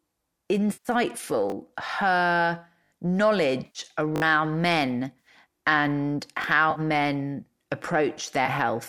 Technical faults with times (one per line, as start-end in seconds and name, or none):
0.72-0.88 AAC frame loss with concealment
1.50-1.52 repeated buffer
2.84-2.92 repeated buffer
3.65-3.79 AAC frame loss with concealment
4.16-4.22 repeated buffer
5.19-5.27 AAC frame loss with concealment
6.42-6.44 repeated buffer
6.71-6.80 AAC frame loss with concealment
8.46-8.48 AAC frame loss with concealment